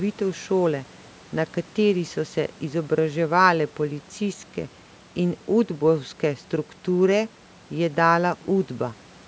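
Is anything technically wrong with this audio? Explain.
No, nothing is technically wrong with this audio.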